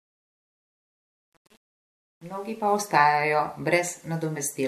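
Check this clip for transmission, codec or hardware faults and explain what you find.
The fade-in at the start of this speech clip suffers truncation distortion. From 0.0 s until the fade reaches full level at about 2.81 s, the gain stage drops low-order bits without dither, which fits a word length of about 8 bits. At low gain the speech waveform collapses onto a few coarse square steps. Up to about 2.68 s the quiet part of the fade sounds gritty instead of rising cleanly out of nothing.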